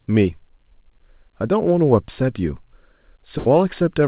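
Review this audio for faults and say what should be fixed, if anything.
There's a burst of packet loss from 3.38 to 3.48 s. About 80 ms of speech never made it, so the receiver stretched and faded the last sound to cover the gap, giving a short buzz or hiss before jumping ahead. The G.711 A-law call path's usual 4 kHz band limit is audible throughout. Adding FEC or a slightly deeper jitter buffer on that link should stop this.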